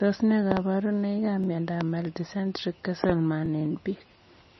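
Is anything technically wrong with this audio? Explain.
Yes. Throughout, the speech sounds watery and dull, with nothing above 5.9 kHz, likely from heavy MP3 compression at a low bitrate around 25 kbps.

At 0.52–0.59 s and 3.04–3.12 s come double pops, with a single one at 1.81–1.83 s. These are sharp loud pops, about 20 dB and about 15 dB above the speech, likely from voltage spikes added to the signal.

At 1.44 s and 3.46 s a brief stutter repeats about 21 ms of sound. These are overlapping chunks, where each 2-second chunk starts before the previous one ends.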